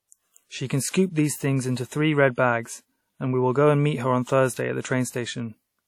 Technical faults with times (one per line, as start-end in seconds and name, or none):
0.00-5.87 WMA compression
0.89-0.94 pre-echo